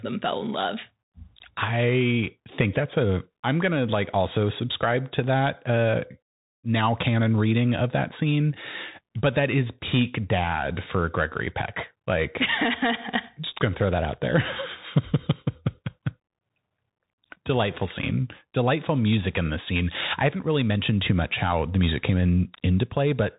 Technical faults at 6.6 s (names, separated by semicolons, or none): Bluetooth CVSD headset codec